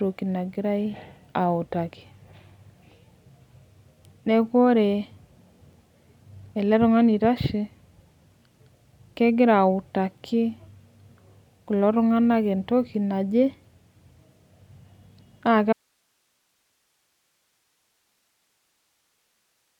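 At 15.73 s the speech cuts off abruptly and never returns. What remains is an audio dropout to a faint residue: only hiss, around 50 dB below the signal, which likely means the source was lost while the downstream path stayed live.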